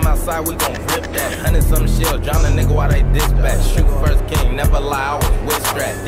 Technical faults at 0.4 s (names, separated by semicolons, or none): corrupt frame decoded